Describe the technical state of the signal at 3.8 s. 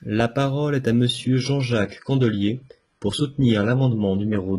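At 3.8 s the speech sounds dull and synthetic. Nothing is left above about 11.1 kHz, and the upper range has the smeared, swishy texture of spectral band replication. This is an adaptive stream at a lower bitrate. From 1.07 s to the end, the player switched to a cheaper version of the stream with no gap, and the sound points to a drop from roughly 96 kbit/s AAC to about 12 kbit/s HE-AAC.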